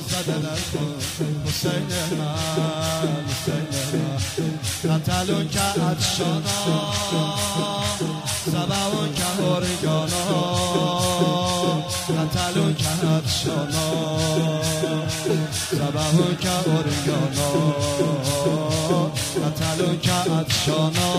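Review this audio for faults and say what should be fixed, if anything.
Nothing to fix: no faults found on review, so no action is needed.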